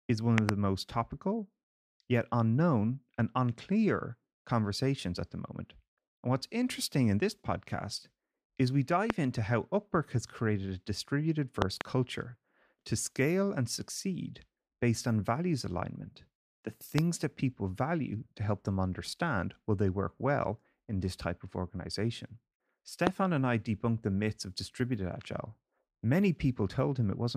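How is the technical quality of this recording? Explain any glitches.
The recording is marred by five loud pops, sharp thumps that jump roughly 20 dB above the speech, which carries on underneath. A double pop at 0.38–0.51 s falls between "is one" and "most topical yet unknown". A single pop at 9.10–9.12 s follows "this podcast is we", before "into how". Another double pop at 11.62–11.83 s comes after "has created a distributed". Single pops land at 16.98–17.00 s and at 23.07–23.09 s, the last one louder, around 25 dB. Each is likely a sudden voltage spike from a plug, switch, static discharge or driver glitch, shaped by the downstream circuitry into a brief, punchy transient.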